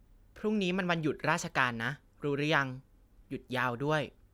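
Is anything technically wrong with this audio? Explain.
No, nothing technically wrong can be heard here.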